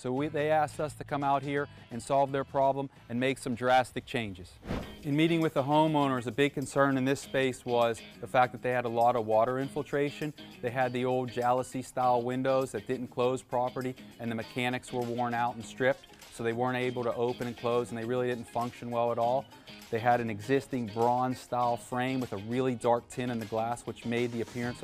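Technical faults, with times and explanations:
No technical faults can be heard anywhere in the clip.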